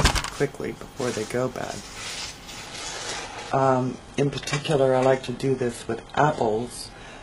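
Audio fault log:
2.67–7.23 s, adaptive stream at a lower bitrate: at 2.67 s the quality drops abruptly with no gap and stays degraded to the end. Nothing is heard above 11.5 kHz, and the remaining treble turns synthetic. This points to a switch from a clean stream to a very low-rate one, consistent with HE-AAC at 12 kbit/s. On a spectrogram, the upper band cuts off sharply at 11.5 kHz from 2.67 s onward, while the waveform stays continuous across the switch.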